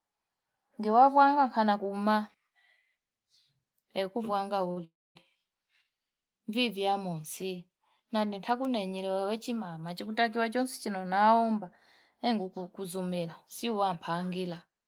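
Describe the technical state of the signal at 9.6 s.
At 9.6 s the signal is intact, with no audible fault at that point in the speech.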